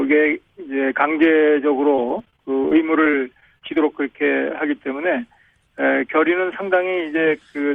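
Repeated packet loss (robotic sound) from 1.95 to 3.76 s: 14 short gaps, up to 29 ms, filled with repeated sound, appear as stuttering blocks and seams on a spectrogram.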